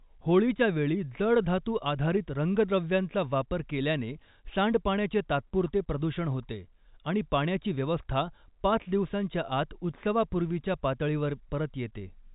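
Nothing stood out on listening to this speech recording, which carries the narrow band of G.711 telephone coding and gives no sign of a technical problem.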